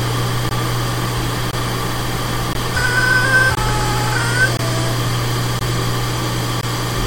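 Seven gaps between chunks land at 0.49, 1.51, 2.53, 3.55, 4.57, 5.59 and 6.61 s. Each is a hard-edged 20 ms hole where the 1 s chunks are joined with silence between them.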